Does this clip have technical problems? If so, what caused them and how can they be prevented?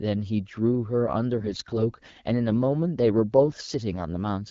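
Yes. From 1.38 to 1.80 s, and again from 3.38 to 3.54 s, the speech turns hoarse, scratchy and gargly while keeping roughly its pitch and loudness. These are AMR bit errors. On a weak link, a few percent of the lightly protected bits in the AMR-WB frames arrived flipped, but the checksum over the critical bits still passed, so the decoder played them. The excitation pulses landed in the wrong positions and the fine pitch, gain and spectral values drifted, which produces the rasp. Between the bursts, the clear AMR-WB sound at 12.65 kbit/s comes through with only light coding damage. Prevent this with stronger channel coding or a more robust codec mode on poor links, and by muting or concealing frames whose error indicators show damage.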